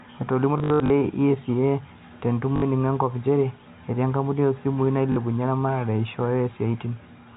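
From 0.58 to 0.9 s the speech stutters robotically: packet loss with the last packet repeated, about 180 ms missing across that stretch, the longest run 60 ms. Shorter repeats follow at 2.56–2.62 s and 5.12–5.16 s. Each gap is filled by replaying the previous chunk, so runs buzz near 50 Hz, which fits 20 ms packets. On a spectrogram this shows as identical repeated blocks, all within the telephone band below 4 kHz.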